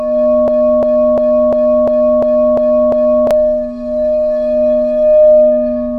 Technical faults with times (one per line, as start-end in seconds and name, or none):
0.48-3.31 broken-record loop